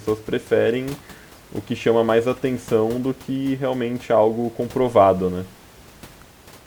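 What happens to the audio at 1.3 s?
Nothing goes wrong at 1.3 s: the speech comes through intact, with only the room's own background noise sitting about 25 dB below it.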